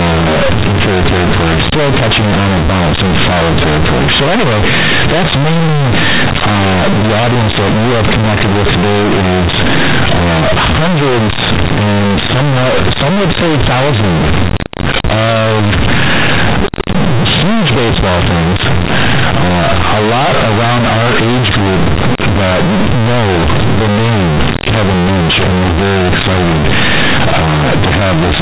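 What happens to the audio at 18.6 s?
At 18.6 s you're hearing companded audio read as linear, present through the whole clip: mu-law bytes played as plain 8-bit samples without expansion, so it's loud, buzzy and noisy in pauses.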